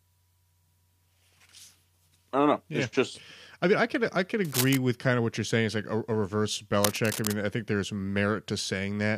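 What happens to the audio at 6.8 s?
At 6.83 s a burst of cable scratch noise cuts in and runs to about 7.39 s: dense, ragged crackle sitting not far below the speech. It's likely a worn lead or connector being shifted, its contact resistance jumping around and spraying uneven noise into the signal.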